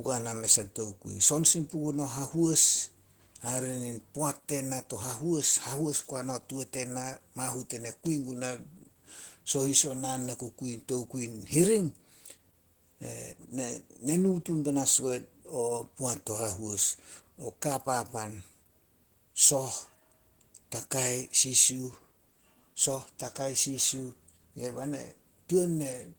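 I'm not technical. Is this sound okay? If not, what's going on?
No. Opus voice compression affects the speech throughout. To save data, the codec rebuilds the voice from a rough model of its sound plus a coarsely coded layer for the high end. Detail is thrown away, so the voice comes out hoarse and a little robotic.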